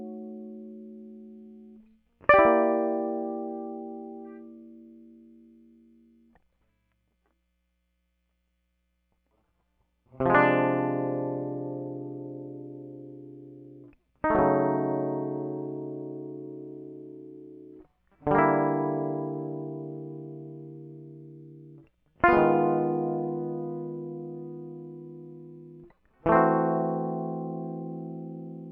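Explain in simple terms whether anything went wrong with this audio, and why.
Listening to this music, nothing stood out as having gone wrong at any point.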